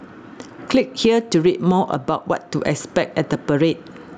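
Gain pumping runs through the whole speech clip: the level swings by around 15 dB, pulled down under each loud syllable, so loud and soft parts sound squashed together. The likely cause is input gain set far too high, with a fast limiter clamping it. Unlike a noise gate, it rides the level rather than cutting sound out.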